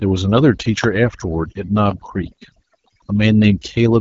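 A speech clip where the background collapses into near silence flecked with twinkling specks throughout, the mark of overdone noise removal cutting individual frequency bands along with quiet parts of speech. The voice also sounds rough and raspy with nothing above 7.5 kHz, pointing to the AMR wideband (HD Voice) codec at a low rate that fits 8.85 kbit/s.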